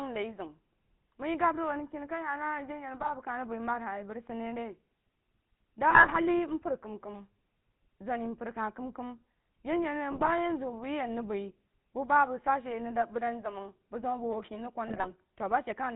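The whole clip has that gravelly, buzzy GSM full-rate codec sound, the texture that fits the old 13 kbps full-rate coder. It models the vocal tract and feeds it a sparse train of regularly spaced pulses, so the excitation is coarse and the voice comes out rough and reedy. Nothing above 4 kHz survives, which makes everything sound boxed in and dull, and here the damage is plainly audible.

On top of that there are four bursts of GSM bit errors: 3.0 to 3.12 s, 5.90 to 6.19 s, 10.12 to 10.32 s, and 14.88 to 15.07 s. In each one, corrupted filter, pitch or gain values reach the decoder and wreck a handful of frames. The voice briefly squawks, pops and gargles as the spectrum warps and the level jumps. The burst around 6 s is the longest and messiest. The density of the damage suggests an error rate of roughly 2 percent on a weak link.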